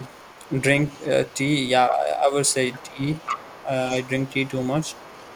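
A speech clip with a second voice leaking through at 0.0 to 1.38 s, 2.48 to 3.65 s, 4.02 to 4.51 s and 4.82 to 5.36 s. It is faint except in the middle stretch, where it sits only about 10 dB under the talker. This is likely far-end audio that the echo canceller left in the microphone signal. The talker's own speech is also suppressed in double talk at 1.9 to 2.33 s, dipping about 10 dB, and at 2.87 to 3.71 s, dropping about 20 dB while the leaked voice is present. The likely cause is the canceller turning everything down when both sides speak at once.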